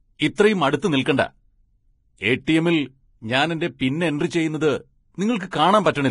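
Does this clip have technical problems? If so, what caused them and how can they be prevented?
Yes. Throughout the speech there is heavy Vorbis compression damage. The treble turns hissy and grainy, consonants blur, and a spectrogram shows nothing above 10.6 kHz, with mottled, noisy patches where fine detail was coarsely quantised. This likely comes from a low-bitrate Vorbis encode, around 27 kbps. Encoding at a higher quality setting, or sending the audio in a lossless format, prevents it.

There is also pre-echo at 0.35 to 0.38 s, 2.45 to 2.48 s, 3.79 s just after "ഞാൻ എന്റെ", and 5.51 to 5.53 s. Quantisation noise from each sharp onset spreads backwards by 16 to 30 ms. On a waveform this appears as a short hiss before each attack, and on a spectrogram as a broadband smear leading the onset. A higher bitrate or an encoder with better block switching would keep this noise from leaking ahead of attacks.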